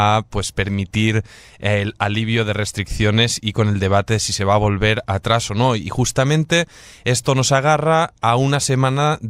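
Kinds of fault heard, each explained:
No technical faults can be heard in this speech recording. The audio runs without dropouts, clicks, distortion or other disturbances.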